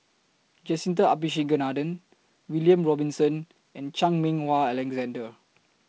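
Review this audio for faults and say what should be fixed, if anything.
Nothing needs fixing: the speech is carried by G.722 wideband telephone coding at 48 kbit/s, which leaves audible content up to about 7 kHz with the light upper-band hiss and slightly noisier lower band expected of that mode.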